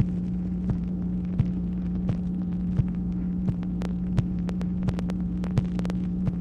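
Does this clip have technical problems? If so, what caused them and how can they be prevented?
Yes. A train of clicks runs from 3.82 to 5.91 s: about fifteen similar pops at an uneven 5.8 per second, well above the sound, likely from interference or a faulty connection or power supply. Prevent it by moving the gear away from noisy equipment, checking cables and connections, and using a stable power supply.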